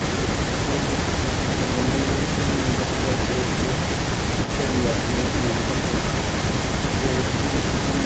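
From 0 s to the end of the clip, the voice played on the far side's loudspeaker comes back as a delayed copy, about 370 ms later and roughly 10 dB quieter, producing a doubled quality. This is an echo leak, likely from the far side playing the call over a loudspeaker while its echo canceller failed to fully suppress what its microphone picked up, so that residue was sent back down the call, which is band-limited to 8 kHz.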